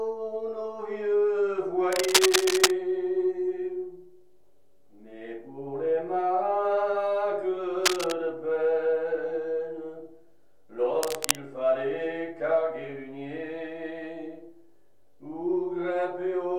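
Cable scratch noise appears at 1.92 to 2.71 s, again at 7.84 to 8.12 s and at 11.03 to 11.35 s: dense, uneven bursts of scratching and rustling laid over the sound. The first burst sits a little above the signal level; the shorter later two are roughly as loud as the signal. The likely cause is a worn cable, connector or control being moved, its contact resistance jumping erratically and injecting noise.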